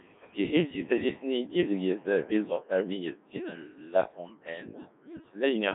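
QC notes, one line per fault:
throughout: Codec 2 vocoder. The speech was cut down to pitch, voicing, energy and a coarse spectral envelope, then rebuilt from sine waves, which fits a 1.3 kbit/s mode. The heavy damage sounds robotic and buzzy, confined to 200 Hz to 3.6 kHz, with nothing above 3.8 kHz.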